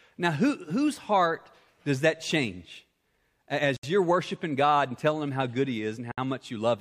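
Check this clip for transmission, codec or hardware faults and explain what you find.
Two gaps at joins of encoded pieces break this speech. The first runs from 3.77 to 3.83 s, about 68 ms. The second runs from 6.12 to 6.18 s, about 61 ms. The pieces were encoded separately and joined untrimmed. Each piece's start-up delay and end padding remain as silence. The speech drops out, with softened edges, then resumes where it left off.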